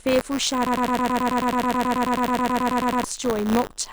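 A speech recording carrying two faults. Buffer tearing runs throughout as a steady robotic buzz at 100 Hz, present only while speech is sounding. That rate points to a 10 ms period in which the writing and reading sides of a ring buffer cross, so a small slice of each period, a few percent, plays audio roughly 20 ms stale, with hard joins either side. Unlike a loop, nothing audibly repeats; the rattle rides continuously on otherwise progressing sound. From 0.67 s to 3.04 s a broken-record loop takes over. A 108 ms fragment repeats exactly, back to back, 22 times, and whatever should have played in those seconds is gone. The likely cause is a player, encoder or stream stalling and resending its last held fragment. What separates it from the tearing is that the whole signal freezes into an identical cycle at about 9 Hz rather than buzzing at 100 Hz under moving audio.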